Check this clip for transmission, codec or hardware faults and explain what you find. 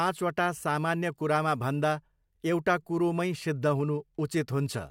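Nothing turned up here: I listened through the speech and couldn't hear any transmission, codec or hardware problem worth flagging.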